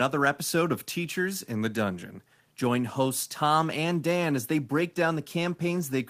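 A speech recording with no technical faults to report.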